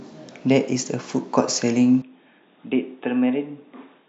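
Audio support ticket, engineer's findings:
Speech turns dull and boxy at 2.02 s, no gap at the change, lasting to the end; nothing above 3.8 kHz, level down about 10 dB, faint new background noise. Likely input switched to a poorer device, its narrower band, different gain and own noise floor replacing the original microphone.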